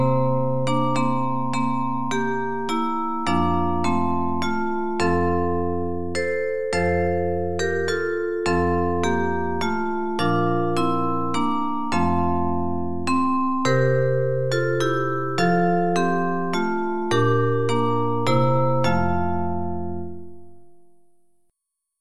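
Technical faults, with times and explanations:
Throughout: sample clock jitter. The converter's clock wanders by roughly a microsecond, so each sample is taken a little early or late at random. The resulting error depends on how fast the waveform is changing at that instant, so it builds on loud passages and sharp high-frequency content and disappears when the sound goes quiet. It sits around 50 dB below the signal, a faint hiss or grain that rides on the audio rather than a steady noise floor.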